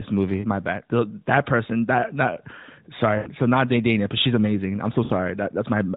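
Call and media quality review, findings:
Lost AMR speech frames, 5.04–5.12 s, right after "but she's amazing I'm": about 60 ms, fitting three 20 ms frames, smeared and fading as the decoder repeats the last pitch and vocal tract settings with falling gain.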